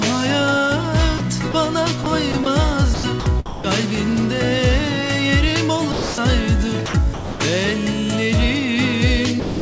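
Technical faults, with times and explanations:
1.18, 1.52 and 2.04 s: sound dropped by the voice detector. Three separate 20 ms gaps give way to comfort noise. The likely cause is that the sender's voice detector briefly judged the quiet signal there as background and stopped transmitting.
2.32–2.46 s and 2.94–3.64 s: sound chopped by the voice detector. The detector likely toggled repeatedly between sending and pausing, replacing about 40 ms and then 340 ms with comfort noise. The sound turns choppy.
5.92–6.18 s: sound dropped by the voice detector. A 260 ms stretch is replaced by steady comfort noise until transmission resumes. This was likely caused by the detector treating lower-level sound as background.
6.86–7.40 s: sound chopped by the voice detector. About 340 ms within this span is swapped for comfort noise in several pieces. The stuttering on-off texture likely comes from the detector repeatedly gating transmission.
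9.40–9.61 s: sound dropped by the voice detector. The final 220 ms, running to the clip's end, fades into comfort noise. The likely cause is the detector classing the tail of the sound as background. The G.722 call path's cut-off above 8 kHz is heard alongside these faults.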